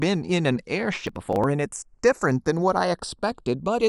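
From the start of the speech the two channels are drifting apart. They run on separate clocks that disagree by something on the order of 70 parts per million, so the delay between them grows steadily, reaching only a fraction of a millisecond by the end. When the channels are summed to mono, that tiny shifting offset produces comb-filter notches that glide slowly across the spectrum. It sounds like a slow flanging. On a spectrogram it appears as curved notch lines sweeping through the frequency bands.

From 1.07 to 1.44 s comes processor overload crackle. For about a third of a second the processor repeatedly failed to deliver audio buffers on time. Each missed buffer was skipped outright, leaving a tiny hole with hard edges. The spacing fits buffers of around 10 ms, with roughly twenty dropped. It sounds like a gritty, tearing crackle riding over the speech until the load eases. On the waveform it shows as a chopped stretch of abrupt discontinuities, and on a spectrogram as a cluster of vertical broadband streaks.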